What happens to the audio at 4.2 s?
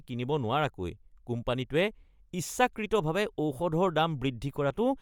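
At 4.2 s the speech has a plainly audible breathy, grainy edge in its upper range. That roughness runs through the whole clip. The likely cause is Bluetooth LC3 compression, which at a rate near 48 kbps with 10 ms frames zeroes parts of the upper spectrum and fills them with noise. Nothing is heard above about 20.2 kHz.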